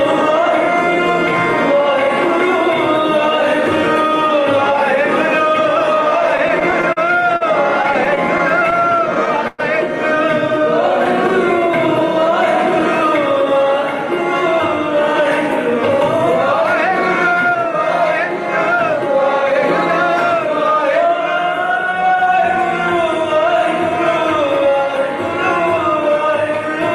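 From 6.27 to 9.60 s the sound drags and stutters, with 22 brief stalls, the longest about 110 ms, where the last sound is held, fading in the longer waits, rather than dropped. These repeated stalls (stutter) come from packets arriving late, so the jitter buffer kept running empty.

From 17.46 to 24.76 s the audio runs slightly fast, about 2% fast at unchanged pitch. This jitter buffer speed-up trims short pitch-period slices, around a fifth of a second in total, to drain an overfull buffer and cut delay.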